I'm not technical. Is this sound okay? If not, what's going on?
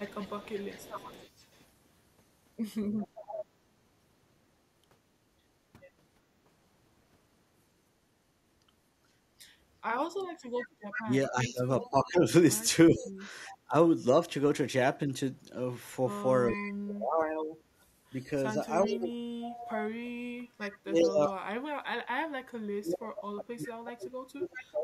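No. Three problems can be heard.

Echo leak: a faint, delayed copy of the speech trails it by about 0.39 s, at 0–3.45 s, 10.6–11.9 s, 13.46–13.57 s, 16.49–21.31 s and 24.57–24.65 s. It is clearest around 10.6–11.9 s. It is likely the other end's speaker sound getting back into their microphone.

Background gated by the echo canceller: from 10.34 to 10.73 s the room sound briefly dips for roughly a fifth of a second, then comes back. The echo canceller turned the microphone down hard while the loudspeaker was playing.

Speech suppressed in double talk: between 11.01 and 13.75 s, and from 16.5 s to the end, the speech dips and partly drops out. In the later stretch it drops deeper. This is likely because both sides spoke at once and the echo canceller turned everything down.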